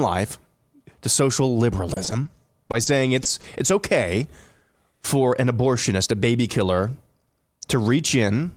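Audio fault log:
1.93–2.27 s, repeated packet loss (robotic sound): four dropouts land in a third of a second, the longest 30 ms. Each gets patched by stretching the previous sound, so about a quarter of the stretch is filler. That's why the speech turns choppy.
2.67–2.71, 2.71–2.75, 2.83–2.88, 3.23–3.27 and 3.41–3.45 s, short concealed packet loss: each hole is only about 20 ms. The receiver fills it by extending the last pitch or noise and then blends back into the real audio, so you hear brief smears or wobbles rather than gaps.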